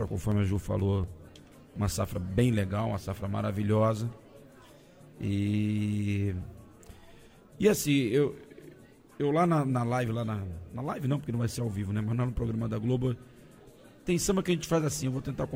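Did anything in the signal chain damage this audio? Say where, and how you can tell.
Yes. Periodic USB or driver dropouts occurred at the driver or buffer stage. From 0.08 to 1.76 s, regular ticks recur every 0.24 s, about seven in all. A blocked bus or driver skipped around 10 ms of sound each time, leaving audible splices.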